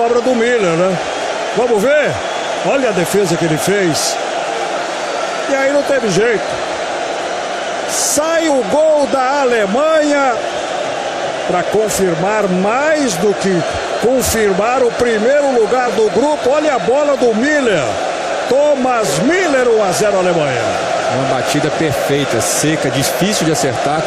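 At 8.46 to 8.50 s the sound stumbles forward, as if a sliver of time had gone missing. This is compressed frames skipped: at least one frame of the encoded stream was never decoded and played, either because it was absent from the file or rejected as corrupt, so playback leaps ahead by about 20 ms.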